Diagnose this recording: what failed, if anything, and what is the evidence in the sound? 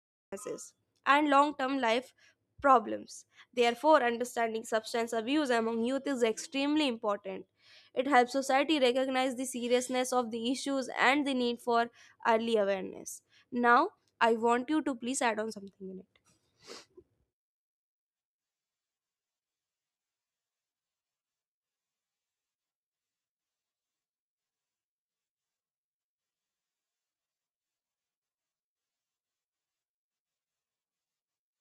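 Cut-off start, at the capture or stream-start stage: digital silence runs to 0.32 s, then speech enters abruptly mid-sound with no attack, because recording began after the talker had started.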